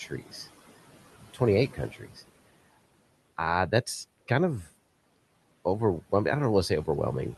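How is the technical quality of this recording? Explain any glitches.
The recording has two glitches, both from the noise suppressor mistaking parts of the speech for background. Room noise sits about 20 dB below the speech and is part of the recording itself.

Speech cut by the noise suppressor occurs from 0.07 to 0.33 s and again from 1.71 to 2.18 s. The suppressor misjudges speech as noise and turns it down, by about 14 dB and 12 dB at worst. About a tenth, then a third, of a second sounds swallowed and faint.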